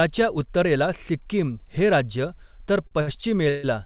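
From 2.82 to 3.65 s, the speech suffers repeated stalls (stutter). Packets arrived late, and the jitter buffer ran dry five times. Each gap was filled by continuing the last sound, the longest for 141 ms. About a third of that span is filler. Nothing is lost, but the speech drags and hiccups. The call path passes nothing above 4 kHz, which fits a G.711 codec.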